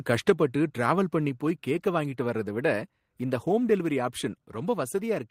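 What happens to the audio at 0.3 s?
At 0.3 s the microphone volume stepped down, most likely because the call software judged the input too hot and cut the device's input volume in a single step of about 4 dB. The effect is an abrupt drop in level: the speech and whatever background sits under it both become quieter at once, with no gradual fade, and stay at that lower level after the step rather than recovering.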